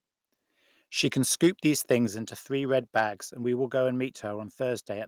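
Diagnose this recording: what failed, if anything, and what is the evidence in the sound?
Microphone overload at the converter: from 1.91 to 1.95 s, just before "into three red", the loudest peak turns harsh and crackly. The waveform tops are flattened where the input ran about 1 dB past the converter's limit, on roughly 2 percent of samples, likely from input gain set too high.

Microphone volume stepped down in call processing: at 2.07 s, just before "into three red", voice and background fall together by about 5 dB in a single step. This is likely automatic gain control reacting to the preceding clipped peak by cutting the device input volume.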